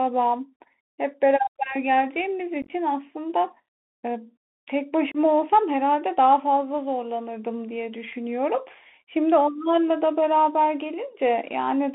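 Speech comes through a narrowband Bluetooth CVSD headset codec for the whole clip. The band runs only from about 200 Hz to 3.5 kHz, which fits a 64 kbps CVSD link. That codec sends one bit per sample, saying only up or down, with an adapting step. Loud high sounds outrun the step and distort. Sibilants turn scratchy, and a granular hiss sits under the speech. The damage is plainly audible. There is also unconcealed Bluetooth headset packet loss at two points. From 2.62 to 2.71 s, 52.5 ms of audio drops out in pieces scattered over 75 ms. The longest gap is 15 ms. This points to around seven lost packets. It sounds like a brief rough crackle with hard-edged holes. From 5.12 to 5.17 s, 30 ms goes missing, which suggests about four packets. Nothing fills these gaps, so the edges are abrupt, and the speech comes back briefly quieter.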